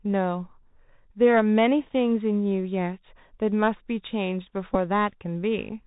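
The speech passes throughout a Bluetooth CVSD headset codec, a one-bit delta coder at 64 kbps whose adaptive step lags fast changes, and nothing reaches above 4 kHz. Sibilants come out scratchy, loud bright sounds distort, and a granular hiss sits beneath everything.

From 4.74 to 4.76 s, a Bluetooth headset packet repeated: voice packets went missing and the chip replayed the last good one. The roughly 11 ms gap, which fits three lost packets, is filled by a brief buzz near 267 Hz.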